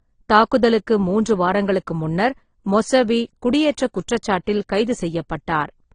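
From start to finish the speech shows transcoding between lossy codecs. Nothing remains above about 9.7 kHz, and two different kinds of damage sit on top of each other: a smeared, swirly coding texture plus a second layer of grainy, warbling artefacts. A single low-bitrate codec leaves one consistent signature. These stacked, mismatched ones point to AAC-LC at around 32 kbit/s likely being re-encoded as Opus at around 24 kbit/s.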